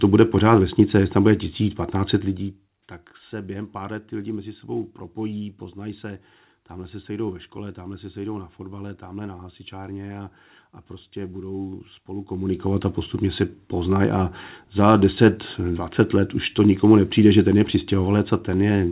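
No faults are audible anywhere in this speech recording.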